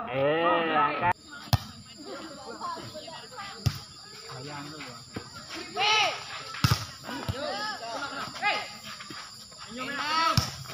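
Nothing is technically wrong with this audio.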